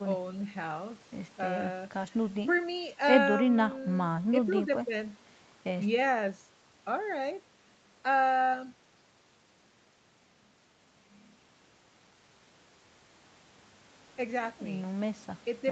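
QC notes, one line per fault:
Nothing to flag here: the speech has been through call microphone processing, which trims away the deepest bass and leaves nothing above 8 kHz, and that's simply how such a path sounds rather than a problem.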